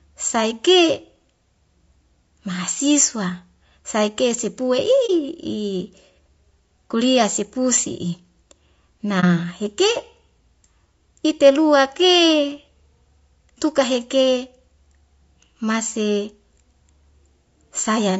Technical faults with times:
0.00-18.20 low-delay AAC compression
5.06-5.10 AAC frame loss with muting
9.20-9.24 AAC frame loss with muting

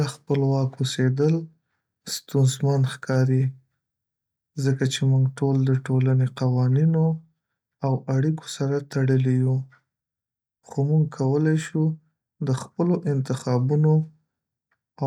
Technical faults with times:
0.31-0.33 hard clipping
1.21-1.26 hard clipping
2.37-2.39 hard clipping
3.11-3.19 hard clipping
4.68-4.83 hard clipping
13.49 hard clipping

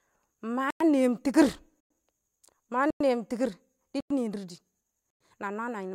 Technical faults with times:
0.70-0.80 gap between chunks
1.80-1.90 gap between chunks
2.90-3.00 gap between chunks
4.00-4.10 gap between chunks
5.10-5.20 gap between chunks

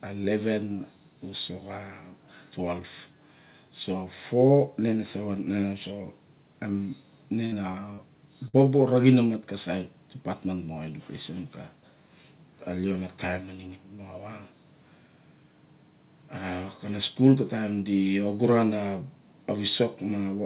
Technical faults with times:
7.46-7.54 burst of packet loss
7.72-8.00 short concealed packet loss
8.48-8.55 burst of packet loss

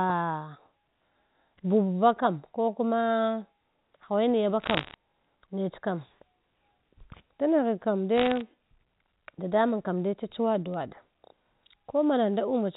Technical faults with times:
4.61-4.94 bit errors on a digital phone line
8.16-8.41 bit errors on a digital phone line
10.74-10.83 bit errors on a digital phone line

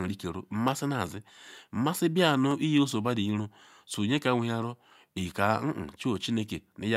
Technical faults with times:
0.68 dropped samples
2.51 dropped samples
6.16 dropped samples

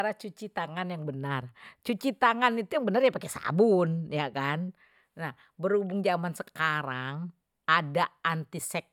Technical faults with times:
none

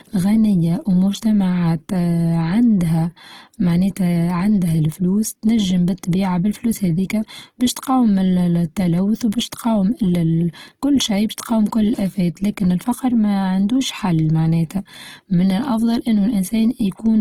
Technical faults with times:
0.00-17.21 Opus compression

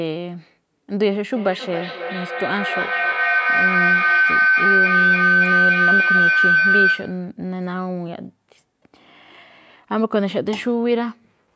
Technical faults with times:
1.36-7.35 feedback howl

